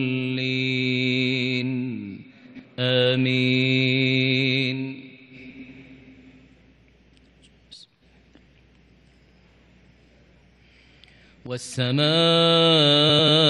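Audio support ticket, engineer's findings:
Frames out of order, three occurrences: 2.46–2.65 s, 5.50–5.69 s, 13.09–13.28 s. Two adjacent frame runs reach the decoder swapped; probable fault in transport/packet reordering ahead of decode. Each stretch plays its two roughly 93 ms halves exchanged, which fits about four frames per half. Audible as a garbled flutter. No time lost; the clip stays in sync.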